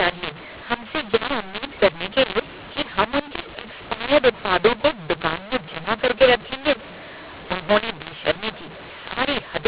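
A mu-law and A-law mix-up runs through the whole clip: the speech was coded with G.711 A-law at 8 kHz but decoded as mu-law, so sample levels are scrambled, some too loud and others too weak. Quiet samples are lifted well above silence, making the speech harsh and distorted and filling pauses with noise.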